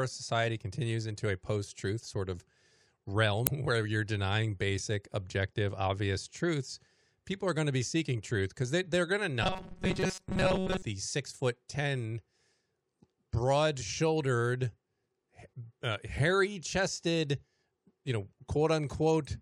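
It's a speech clip with two problems. Around 3.44 to 3.49 s there's a brief burst of damaged data in a compressed stream: the decoder misreads corrupted frames there and has to hunt for the next valid frame header. Then from 9.43 to 10.83 s the speech turns into a rigid, metallic 188 Hz buzz, robotic sound likely from repeated short buffers. Roughly five-millisecond chunks get replayed to cover late audio, so most of that stretch is repeats rather than real signal.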